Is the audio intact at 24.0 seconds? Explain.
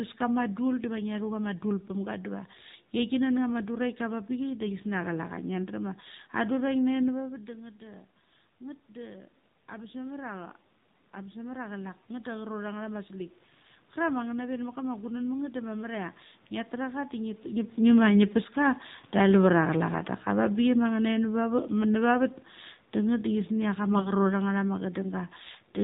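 No. From 23.92 to 24.11 s, AMR bit errors make the sound hoarse, scratchy and gargly. Corrupted bits in a few frames put the codec's excitation pulses in the wrong places and skew its finer pitch, gain and spectral values. The level and rough pitch survive, which sets this apart from a dropout or a muted frame.

The same moment also falls inside automatic gain falling, from 17.78 to 24.63 s. The gain control lowers its gain step by step by about 7 dB, so the sound and its background sink together. A talker moving relative to the microphone, as happens near 17.5 s, changes only the voice level and leaves the room noise steady.

Underneath all of this, the AMR narrowband mobile codec cuts everything above 4 kHz. Its buzzy, synthetic quality fits a low mode of around 7.4 kbps.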